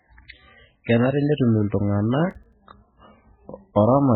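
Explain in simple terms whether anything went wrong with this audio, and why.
Two things went wrong. The first runs through the whole speech clip: heavy MP3 compression, likely from encoding with far too few bits. Nothing is left above about 4.4 kHz, so the voice sounds dull and boxed-in, and the quieter details come and go from moment to moment, giving a watery, swirling quality. The encoder threw away whatever its hearing model judged least important, and here that was a great deal.

The second is processor overload crackle, from 2.31 to 2.53 s. During that stretch the computer handling the audio fell behind and missed a run of deadlines, roughly seven of them. That fits buffers of around 5 ms. Each missed buffer was filled with silence, so the sound is chopped by tiny hard-edged gaps. Together they come across as a short gritty crackle that stops once the load eases.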